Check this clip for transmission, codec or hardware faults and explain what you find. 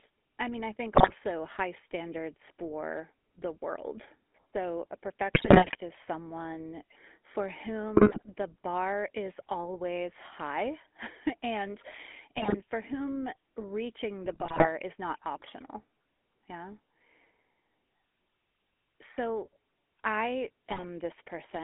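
Two faults are present: GSM full-rate coding throughout, and six bursts of GSM bit errors.

The GSM full-rate codec affects the whole clip. Speech sits between 250 Hz and 3.5 kHz, consistent with 13 kbps GSM full rate. Pulse-driven excitation makes it plainly buzzy and gravelly.

GSM bit errors occur at 0.95–1.13 s and 5.34–5.76 s. They recur at 7.96–8.25 s, between "is someone for" and "the bar is always". Another burst falls at 12.36–12.56 s, before "for whom reaching". One more runs 14.24–14.68 s, between "for whom reaching" and "is not optional". The last is at 20.67–20.83 s. Flipped bits corrupt filter, pitch and gain values frame after frame while each burst lasts. The speech breaks into squawks, pops and gargling.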